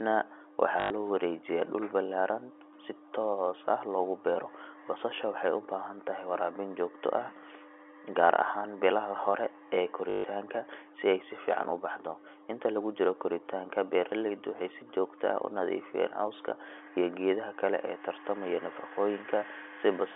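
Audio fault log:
0.8–0.9 s and 10.1–10.24 s, packet loss with last packet repeated: two short robotic stutters, about 100 ms and then 140 ms long. When packets went missing, the receiver kept replaying the last one it had until fresh audio turned up. Those replays don't line up with the pitch, so the run buzzes at around 50 Hz, which points to 20 ms packets. The stutters come through the narrow 300–3400 Hz telephone band of the G.711 line.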